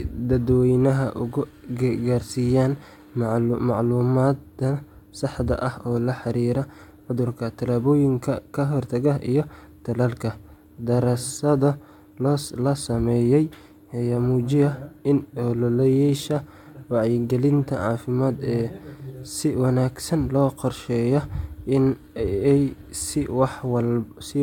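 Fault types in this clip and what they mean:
No faults are present in this recording.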